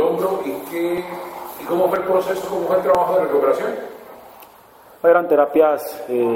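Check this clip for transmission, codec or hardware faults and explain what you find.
One fault turns up: an overlap between stream segments. It occurs at 0.98, 1.96, 2.95 and 4.94 s. The spacing follows a 1-second segment grid. At each boundary, two segments claimed the same span of time. The player discarded the shared part, though nothing was actually duplicated. Between 6 and 14 milliseconds of sound vanish each time. The waveform jumps across the gap. Each event is heard as a brief click or tiny skip.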